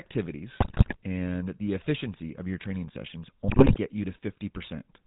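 GSM full-rate codec coloring runs through the whole clip: the speech is rebuilt from a vocal-tract filter driven by a coarse, regularly spaced pulse excitation, giving a buzzy, gravelly roughness with nothing above 4 kHz, which fits the 13 kbps full-rate coder.

GSM bit errors strike from 0.6 to 0.97 s and again from 3.48 to 3.77 s. Corrupted filter, pitch and gain values reach the decoder, so the spectrum warps and the level jumps frame by frame, breaking the speech into squawks, pops and gargling.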